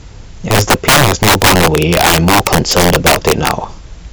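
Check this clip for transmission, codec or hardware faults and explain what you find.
There's a clear integer overflow fault running through the whole speech clip. The signal is pushed roughly 12 dB too hot, and instead of being held at the top of the integer range, any sample past the limit wraps around to the opposite extreme. Only a few percent of samples cross that line, all on the loudest peaks, but each one jumps full-scale. You hear it as harsh, violent cracks on loud syllables, much nastier than ordinary clipping.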